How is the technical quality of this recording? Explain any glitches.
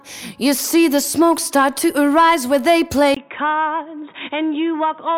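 Quality drops partway through. From 3.15 s to the end, after a 20 ms silence, the sound turns dull, a few dB quieter and band-limited to 3.8 kHz, with new faint background noise, likely from the input being switched to a poorer device.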